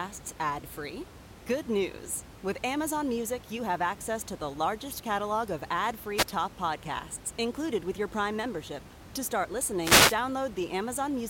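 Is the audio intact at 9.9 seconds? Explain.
No, at 9.9 seconds you're inside a wireless microphone noise hit running from 9.81 to 10.17 s. The FM radio link fades as reflected signals cancel each other, so the receiver's own noise rises and sweeps over the speech as a short swish of static.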